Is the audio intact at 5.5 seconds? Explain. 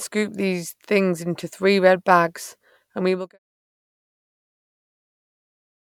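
Yes, the audio is intact at 5.5 seconds, with no fault present at that moment.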